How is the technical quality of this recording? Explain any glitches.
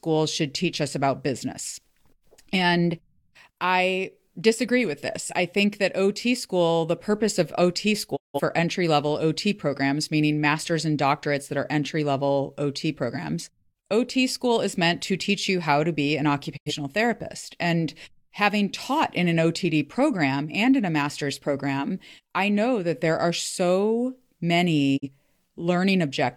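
The speech is interrupted three times by digital broadcast dropouts, at 8.15 to 8.41 s (just before "entry level"), 16.56 to 16.72 s (right after "how to be an") and 24.96 to 25.09 s. Each time the receiver stopped getting valid frames and muted, fading out over about 20 ms. The holes lose roughly 170, 85 and 43 ms of programme, which fits four, two and one lost frames. The missing audio never returns.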